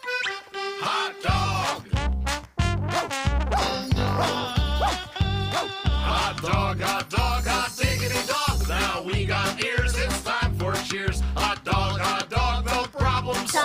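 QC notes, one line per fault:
No faults to note.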